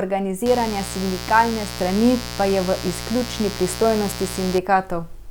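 Mains buzz runs from 0.46 s to 4.59 s, a steady, raspy drone sitting not far below the speech. It is built on 60 Hz: something in the signal path, such as a dimmer, a rectifier or an unshielded cable, is letting sharp switching spikes through twice per mains cycle. Those spikes carry a dense ladder of 60 Hz harmonics stretching up into the kilohertz range, which gives the buzz its gritty edge.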